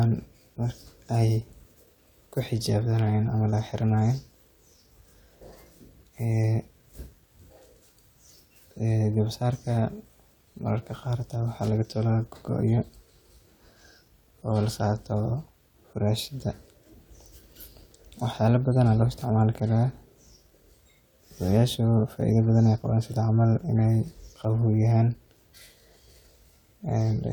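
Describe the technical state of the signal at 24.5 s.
At 24.5 s the speech signal is intact, with no audible fault at that moment.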